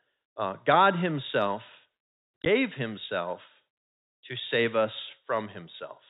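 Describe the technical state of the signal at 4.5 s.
At 4.5 s the speech is intact, carried through G.711 telephone coding that limits it to the usual narrow band below 4 kHz.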